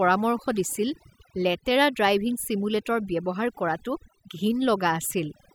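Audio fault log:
Throughout: overdone noise removal. A noise reducer set far too hard mutes individual frequency bands wherever they sit near its noise estimate, taking quiet parts of the speech along, so pauses fall to near silence sprinkled with twinkling specks. A spectrogram shows a blotchy, patchy texture with isolated bright dots in the gaps.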